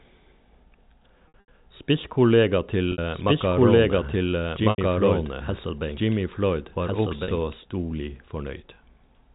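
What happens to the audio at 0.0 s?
At 0.0 s the speech is intact, carried through G.711 telephone coding that shows little or no audible damage beyond its usual narrow band.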